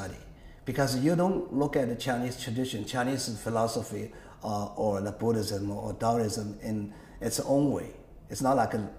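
No fault can be heard anywhere in the clip.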